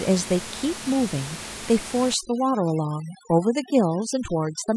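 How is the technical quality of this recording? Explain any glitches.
The recording has one clear fault: overdone noise removal over the second half of the clip, from 2.14 s to the end at 4.76 s. Up to that point a steady room noise sits about 13 dB below the speech. From 2.14 s a noise reduction stage clamps down too hard. Any frequency band that falls close to its noise estimate is pushed far down or switched off, and quieter parts of the speech are cut along with the noise. The room tone drops and breaks up into twinkling specks. On a spectrogram the smooth noise floor gives way to dark gaps scattered with isolated bright dots, and the speech harmonics look ragged. The waveform's noise floor drops sharply at 2.14 s.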